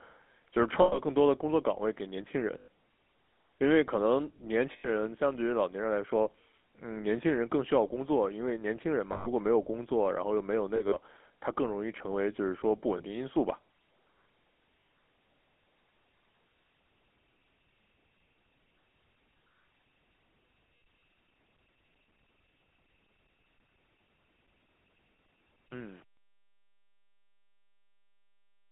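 The whole recording runs through the GSM full-rate codec, whose band of roughly 250 Hz to 3.4 kHz and coarse, pulse-driven excitation fit a 13 kbps GSM full-rate link. The codec rebuilds the voice from a vocal-tract model fed by sparse pulses, so the speech comes out narrow and boxy, with a plainly audible buzzy, gravelly grain over every syllable.

Lost GSM frames interrupt it seven times. Each time, the decoder keeps replaying the parameters of the last good frame, so the sound freezes into a short, rough, metallic ring in place of the missing speech. The gaps fall at 0.82 to 1.00 s (100 ms), 2.58 to 2.68 s (100 ms), 4.72 to 4.88 s (120 ms), 9.12 to 9.28 s (140 ms), 10.76 to 10.98 s, 12.98 to 13.02 s (20 ms) and 14.80 to 14.88 s (80 ms). The one at 10.76 s is broken up, with 80 ms lost across about 160 ms in runs of about 40 ms at most, so it stutters rather than holding one ring.

Truncation distortion on a fade begins at 25.66 s and lasts to the end. 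The closing fade-out, which runs to 28.7 s, was computed with only 8 bits and no dither. As the level drops toward the smallest step, the waveform collapses into a few square stairs. From 25.77 s onward the tail sounds gritty.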